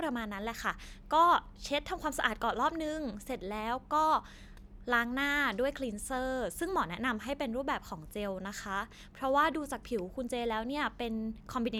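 Listening to the speech recording, nothing stood out as a technical problem.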